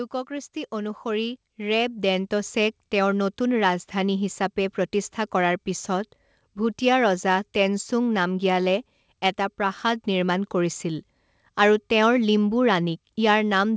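From 0.11 s to 2.6 s the speech shows automatic gain rising. The gain control judged the input too quiet. It then raised its gain step by step, by about 10 dB over roughly two and a half seconds. The voice and the room noise swell together. The start sounds quiet, then grows steadily louder. The call path has no content above 8 kHz, consistent with G.722.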